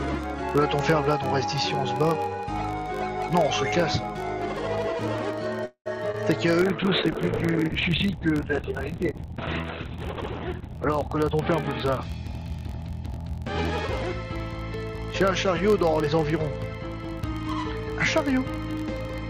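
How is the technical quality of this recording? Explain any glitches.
The recording has several technical faults: a constant low buzz, a brief stall, a short smear and a long stretch of degraded, muffled sound containing two hurried passages.

A low buzz at about 46.9 Hz runs from start to finish and rises and falls with the level of the audio. This comes from a filter restarted on every block. The filter discards its memory between blocks and begins each one from silence, so every block boundary produces a small transient. These ticks repeat fast enough to merge into a buzz. The rate fits a block of 1024 samples.

From 5.65 to 5.88 s the sound hangs. The last sound is drawn out as a fading buzz, then goes silent for about 90 ms, and then resumes exactly where it left off. Nothing is lost, but about 203 ms of delay is added. This is likely a call audio freeze: packets were held up in transit, the jitter buffer ran dry, and the receiver stretched the last audio until data arrived again.

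At 6.12 to 6.16 s there is a brief smear lasting about 20 ms. This is short concealed packet loss. That slice of audio never reached the decoder in time, so the receiver patched the gap by continuing the preceding sound and then blended back into the real signal. A very short sound in that window may have been lost entirely.

From 6.62 to 13.03 s the audio turns rough, watery and muffled, and the top end disappears. This is a call bitrate drop. The sender's bandwidth estimate fell, and the encoder went from 48 kbps down to 6 kbps, where it stayed for about 3.7 s. At that rate it cut the audio bandwidth from 20 kHz to 4 kHz and coded the remaining signal much more coarsely.

Inside that degraded stretch, two passages sound hurried while keeping the same pitch: 10.61 to 11.35 s runs at about 107% speed, and 12.45 to 12.93 s at about 108%. These are jitter buffer speed-ups. The buffer was holding more audio than its target, so the receiver trimmed short pitch-period-length pieces again and again to catch up. 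This removed around 70 ms from the first passage and around 50 ms from the second.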